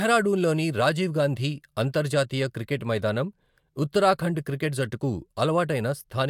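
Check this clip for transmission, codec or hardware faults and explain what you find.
Nothing stood out on listening to the speech here.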